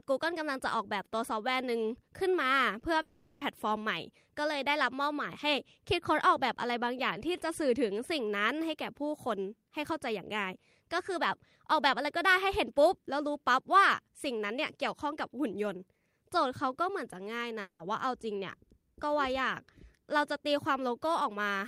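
At 2.79 to 2.83 s, 20 ms of speech missed the decoder, a short concealed packet loss. The receiver extended the preceding sound across the hole and blended back, leaving a brief smear in the voice.

From 3.01 to 3.43 s, and again at 17.61 to 17.81 s, the gaps sound like a long network dropout, likely caused by audio failing to arrive. The first is bridged entirely by a 400 ms fading continuation of the last sound. The second is a 180 ms stretch that decays with about 90 ms of silence before speech resumes, with the lost material absent.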